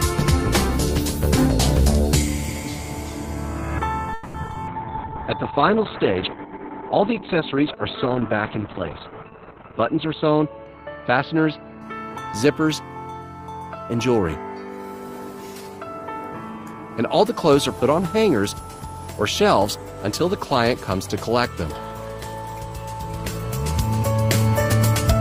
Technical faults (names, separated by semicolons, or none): call audio freeze; repeated packet loss (robotic sound); call bitrate drop; jitter buffer slow-down; jitter buffer speed-up